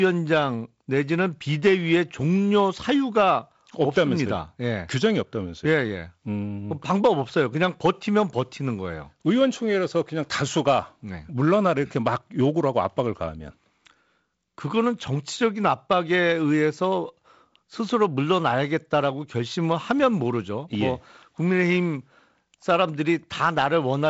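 No technical faults are audible.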